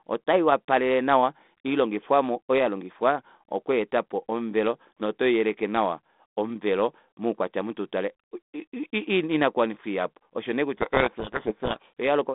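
From 10.77 to 11.91 s, just after "inakuwanifwa ihapu oshonee", the speech disappears under harsh, grinding distortion. This is a codec payload misread: the G.726 code words arrive in reversed bit order, so the decoder applies wrong difference values throughout that stretch.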